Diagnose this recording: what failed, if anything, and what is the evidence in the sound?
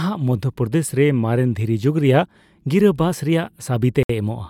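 The speech drops out cleanly from about 4.03 to 4.10 s, a hard 64 ms hole of silence with no fade either side, and then just carries on. That pattern points to the wireless link, most likely a Bluetooth stall: a burst of interference delays packets, the headphones' buffer runs empty, and playback sits silent until the resent packets land and the stream restarts.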